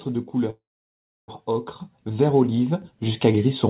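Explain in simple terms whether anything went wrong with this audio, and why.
From 0.5 to 1.3 s there is a call audio freeze: the last sound trails off into silence, likely because packets were held up, then resumes with nothing lost. The microphone volume stepped up twice, at 1.80 s and 2.82 s, making everything abruptly louder as the call software raised the input level. Through the phone-style call path, nothing above 4 kHz comes through.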